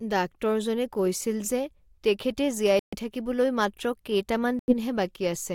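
Speech with two Bluetooth stalls: silence of 134 ms at 2.79–2.95 s and 88 ms at 4.59–4.74 s, blank gaps on waveform and spectrogram, likely from interference draining the buffer.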